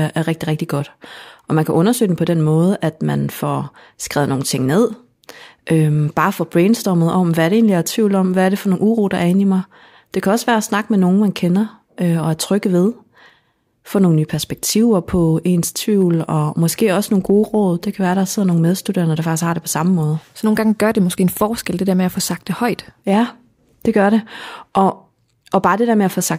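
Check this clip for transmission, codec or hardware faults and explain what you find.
No transmission, codec or hardware faults are audible anywhere in this speech recording.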